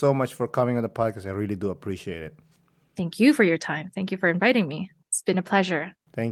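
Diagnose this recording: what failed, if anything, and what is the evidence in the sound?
Nothing failed: no stage from capture to playback leaves an audible fault on the speech, so there is no evidence to cite.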